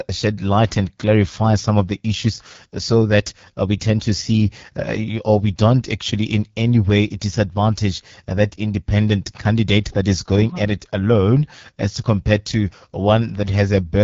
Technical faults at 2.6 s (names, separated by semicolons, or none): AMR wideband (HD Voice) codec